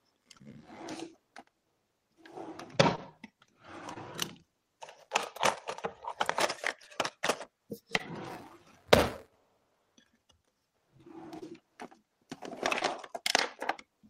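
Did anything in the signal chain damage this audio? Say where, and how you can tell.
Yes, at the network stage: short concealed packet loss at 0.37, 2.95, 3.94, 6.84, 7.97, 11.39 and 12.79 s. Each time about 20 ms went missing and was filled by extending the preceding sound, heard as a brief smear or wobble. A spectrogram shows frozen partials or a noisy patch; the waveform repeats a cycle.

The driver or buffer stage shows buffer tearing from 8.26 to 9.36 s. The write and read pointers crossed, splicing in a small slice of audio about 10 ms old with hard joins, giving a 188 Hz rattle that fits a 256-sample buffer. It appears as regular waveform steps and spectrogram vertical striations.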